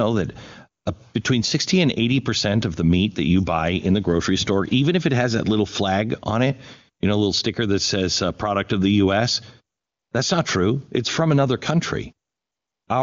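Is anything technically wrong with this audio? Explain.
Yes. The phone judged the talker silent and stopped sending speech frames, so the receiver inserted AMR comfort noise at 0.84 s, 9.77 to 10.11 s, and 12.29 to 12.87 s. In those gaps, the real background gives way to a smooth, steady synthetic hiss that switches abruptly in and out.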